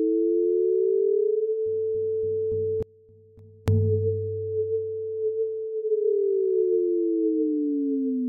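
At 2.83 s the sound cuts out abruptly, leaving only a faint leak roughly 30 dB down until 3.68 s: an audio dropout to a faint residue, likely a signal break while the downstream path stayed live.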